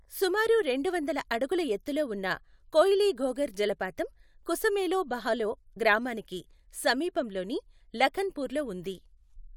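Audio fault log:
Nothing in the speech stood out as a fault on listening.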